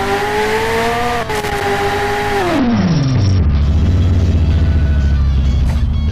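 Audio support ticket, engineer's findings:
Loose connector crackle, 1.35 to 1.61 s: irregular burst of scratchy crackle. Probable worn or dirty contact making and breaking as it moves, chopping the signal.

Bluetooth SBC bit pool drop, 2.58 to 3.62 s: treble dulls and gritty noise rises, then clears. Consistent with the SBC bit pool falling from 31 to 8, around 66 kbps, starving the upper sub-bands.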